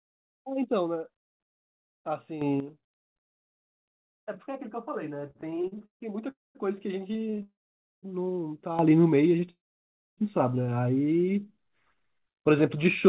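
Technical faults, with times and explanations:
2.42–2.60 s and 8.79 s to the end, sudden gain jump: the level leaps by about 9 dB, then about 10 dB, noise and all, likely from a gain step applied with no ramp.
5.28–6.02 s, 7.11–7.41 s and 9.38–9.49 s, repeated stalls (stutter): the jitter buffer keeps running dry, so the sound hiccups and drags; the first run is worst, with gaps up to 148 ms.
6.30–6.57 s, 7.43–8.05 s and 9.51–10.20 s, call audio freeze: the sound hangs, fades to silence for about 0.2, 0.5 and 0.6 s, then resumes where it stopped, likely from packets held up in transit.
11.26–12.43 s, jitter buffer slow-down: the buffer repeats single pitch periods to rebuild its reserve, adding 155 ms, so this stretch plays at about 87% speed, same pitch.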